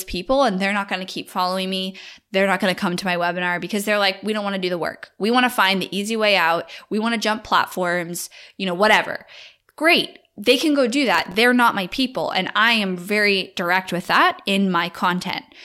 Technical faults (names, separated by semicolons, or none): processor overload crackle